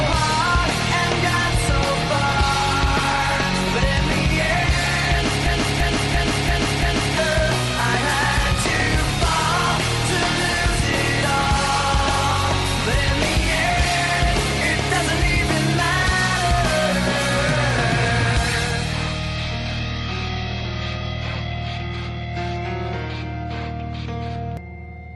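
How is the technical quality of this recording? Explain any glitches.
The recording has one clear fault, a system hang loop, from 5.46 to 7.17 s. The machine or its driver stalled while the sound hardware kept replaying the last chunk in its ring buffer. A 341 ms slice repeats exactly five times at about 2.93 per second, a slow, rhythmic stutter. That length fits a 16384-sample buffer. Unlike a dropout or codec glitch, each repeat is identical and evenly spaced, and roughly a second and a half of audio never arrives.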